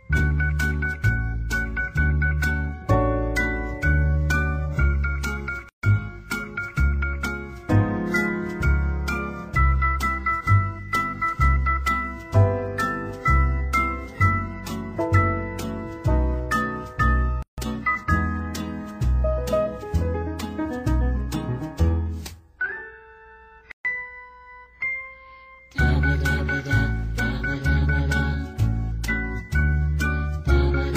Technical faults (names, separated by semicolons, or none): gap at a join of encoded pieces